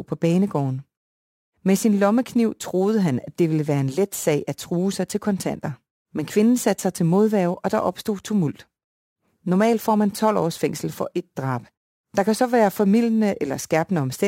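A gritty, inharmonic fizz rides on the speech from start to finish, strongest on loud passages and sibilants, sitting roughly 30 dB below the voice. This is crude rate conversion. Samples were simply dropped to the nearest position rather than filtered and resampled, and the pattern fits a 48 kHz to 44.1 kHz change. The repeating timing error turns into shifted, inharmonic copies of the speech.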